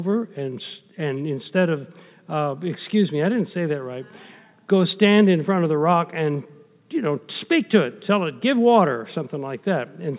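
Nothing stood out on listening to this recording.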